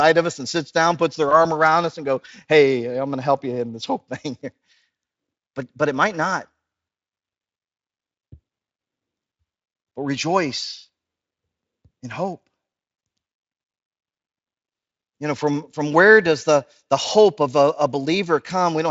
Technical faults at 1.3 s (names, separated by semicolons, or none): VoIP packet loss concealed by the speech codec